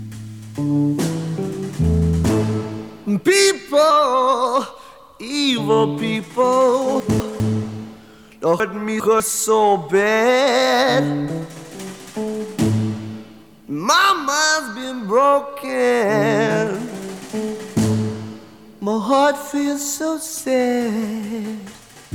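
Chunks out of order at 7.0 to 7.4 s and 8.6 to 9.2 s: a 200 ms block plays one slot late, then another two slots late, producing a brief jumble. The waveform and spectrogram show abrupt discontinuities at each hard join.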